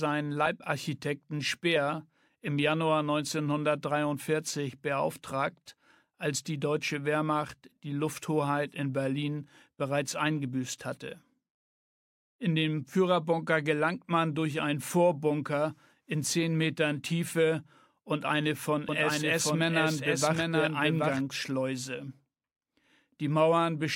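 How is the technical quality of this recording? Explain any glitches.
The recording has one clear glitch, a doubled audio track between 18.89 and 21.21 s. A second full-band copy trails by roughly 0.7 s at around 5 dB lower, likely from a slower capture path or a misaligned edit. It sounds like a dry, roomless echo. On a spectrogram the same patterns repeat shifted in time, and the waveform shows the copy starting and stopping abruptly.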